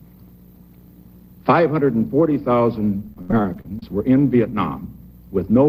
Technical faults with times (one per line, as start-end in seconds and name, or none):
3.00-3.83 repeated packet loss (robotic sound)